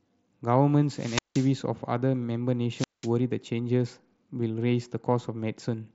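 Speech recorded through a chain that includes an analogue wireless microphone and a Bluetooth headset link. Two wireless microphone squelch dropouts occur, from 0.90 to 1.58 s and from 2.75 to 3.10 s. In each, the FM radio signal weakens, hiss swells, and the receiver's squelch then shuts the output, leaving a gap of near silence of 170 ms in the first and 194 ms in the second before the speech returns. A concealed Bluetooth headset packet loss falls at 4.53 s. About 7.5 ms of audio goes missing, consistent with a single lost frame. The receiver fills the hole by repeating a closely matching piece of the preceding waveform, so the patch is almost inaudible. The mSBC headset codec itself carries the speech with only light coding grain and an 8 kHz bandwidth ceiling.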